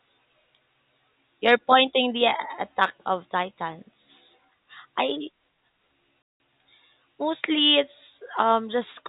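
Packet loss filled with silence at 6.22 to 6.40 s: an 180 ms stretch of speech, which fits nine 20 ms packets, is replaced by dead silence with hard edges.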